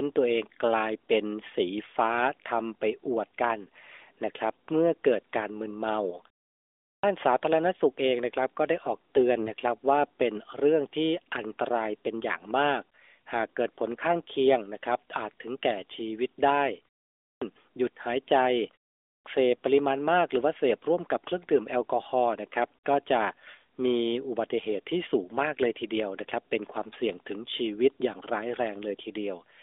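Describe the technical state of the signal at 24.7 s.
At 24.7 s the speech is intact, with no fault present at that moment.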